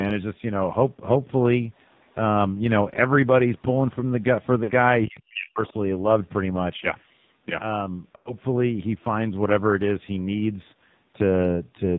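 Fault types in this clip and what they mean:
AMR narrowband mobile codec: The speech is band-limited to 4 kHz and sounds heavily buzzy and synthetic throughout, which points to a low AMR-NB mode near 5.9 kbps.
Other side's voice leaking through: A very faint second voice appears briefly near 1.8 to 2.1 s and again, faintly, around 5.7 s, likely residual loudspeaker echo passing the echo canceller.
Lost AMR speech frames: Short concealment gaps where the sound smears and fades, 40 ms at 4.64 s and a longer 100 ms stretch at 8.16 s.
Speech suppressed in double talk: From 5.06 to 5.74 s the talker drops very deeply in pieces over about half a second, likely the echo canceller attenuating during simultaneous talk.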